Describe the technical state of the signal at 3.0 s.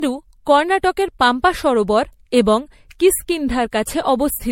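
At 3.0 s the speech sounds swirly, hollow and smeared, with consonant attacks blurred and nothing audible above 16.5 kHz, as it does across the whole clip. This is generation loss, likely from the audio being decoded and re-encoded around five times with MP3, in a way that fits a 64 kbit/s setting. Each pass requantises on a shifted frame grid, so noise and spectral gaps accumulate beyond what one encode would leave.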